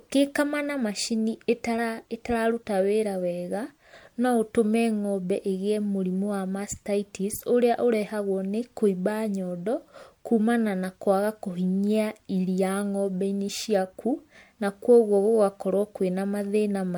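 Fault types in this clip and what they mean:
generation loss: Throughout, the speech sounds swirly, smeared and hollow, with blurred consonant attacks, worse than one MP3 pass at around 96 kbit/s would give. The likely cause is about four rounds of lossy re-encoding, each adding fresh quantisation noise and spectral holes.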